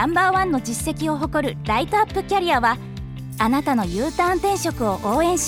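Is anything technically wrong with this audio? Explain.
No, there is nothing technically wrong with this audio that a listener can pick out.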